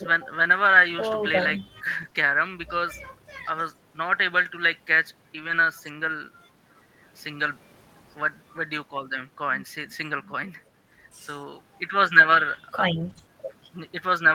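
Packets went missing around 2.01 to 2.15 s, 5.35 to 5.53 s and 13.01 to 13.19 s. At 2.01 to 2.07 s, 2.13 to 2.15 s, 5.35 to 5.53 s, 13.01 to 13.11 s and 13.17 to 13.19 s, each loss was a lost packet rebuilt from error correction. The next packet carried a low-bitrate copy, which the decoder played instead. No gap opens, but the speech turns briefly rough and noisy, including across the longer stretch near 5.4 s.

At 2.09 to 2.13 s and 13.13 to 13.17 s, short concealed packet loss left 20 ms with no copy at all. The decoder extended the preceding sound to cover the hole and then blended back, leaving a brief smear or wobble between the rebuilt stretches.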